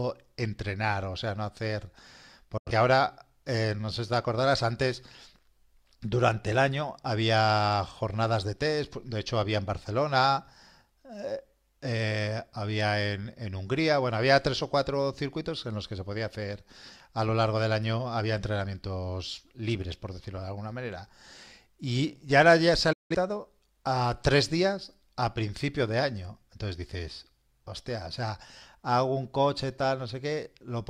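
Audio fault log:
2.57–2.71 s, digital broadcast dropout: the receiver lost valid frames and muted, fading out within about 8 ms; the roughly 85 ms gap fits two lost frames.
22.93–23.15 s, digital broadcast dropout: a longer mute of about 171 ms, consistent with four corrupted frames; the programme sent meanwhile is gone, and sound resumes mid-stream.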